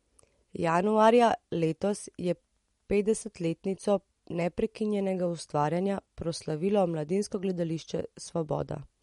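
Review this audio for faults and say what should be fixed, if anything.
The audio was likely squeezed through MP3 compression at too low a bitrate, consistent with roughly 48 kbps. Running short of bits, the encoder cut the treble off at a fixed point, so nothing remains above 11.2 kHz, and it discarded weak frequency detail that now flickers in and out between frames. Throughout the speech this gives a watery, swirling texture, chirpy metallic edges on s sounds, and softened consonant attacks. To prevent it, keep the recording uncompressed or encode at a substantially higher bitrate before distribution.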